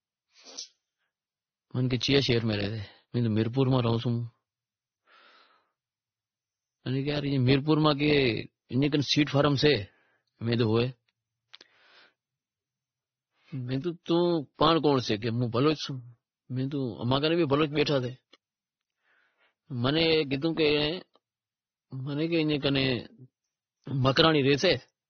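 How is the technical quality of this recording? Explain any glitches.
The recording is technically degraded for its whole length by compression damage. The speech has nothing above 6.3 kHz and carries several overlapping layers of codec artefacts.

Transcoding between lossy codecs, present throughout: the sound likely passed through a chain of lossy encoders rather than just one. The layering suggests an AAC stage at very low bitrate, then MP3, then WMA. The later encoders spent their bits re-encoding the earlier artefacts and added their own. The 6.3 kHz ceiling from the lowest stage stayed, so the speech sounds dull.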